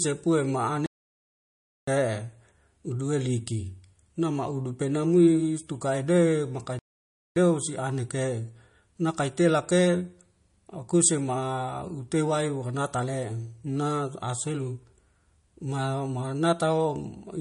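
Throughout the speech, the top end is cut off cleanly at 10.6 kHz and the remaining band has a watery, swirling texture with chirpy sibilants. This is plainly audible MP3 compression, likely from encoding at a low bitrate around 40 kbps.

At 0.86 s the sound drops out and resumes at 1.87 s, a gap of about 1.0 s. After "penamui stukai be makang" it stops again from 6.79 to 7.36 s. Both silences are likely playback stalls, where the player ran short of data and output nothing until it recovered.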